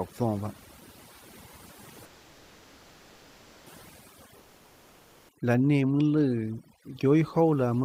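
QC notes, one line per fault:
Throughout: overdone noise removal. Bands near the estimated noise floor are pushed far down, leaving a lowered background that breaks into twinkling specks.
2.05–3.69 s: call audio freeze. Speech stalls for 1.6 s while the last sound carries on as a fading buzz, likely an emptied jitter buffer, then resumes where it stopped, nothing lost.
4.39–5.32 s: long network dropout. About 0.9 s of speech is replaced by a fading continuation of the last sound, likely from lost packets, and resumes further on without the missing part.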